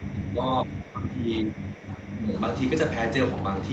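From the start to 0.44 s, and again from 0.64 to 2.33 s, the speech dips by up to about 10 dB. That's speech suppressed in double talk, most likely an echo canceller mistaking the talker for far-end echo and ducking it.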